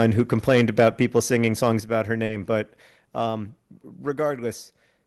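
From the start to 1.7 s, the microphone input was likely set too high, so peaks drove the converter about 6 dB past its ceiling. That is microphone overload. A small share of samples had their tops flattened, giving the loudest syllables a harsh, crackling edge.

At 1.8 s, just before "about her", the call software likely stepped the microphone volume down in a single move of about 5 dB. Voice and background drop together at once, right after the distorted stretch.

Between 2.25 and 2.31 s, after "about her" and before "but um", about 40 ms of audio arrived too late for the decoder. This short concealed packet loss was covered by extending the preceding sound, and it comes through as a brief smear before the real signal blends back in.

At 2.82 s, the microphone volume likely stepped down again, by about 3 dB, and the whole level drops once more. Through all of this, the Opus call path keeps its content below 12 kHz.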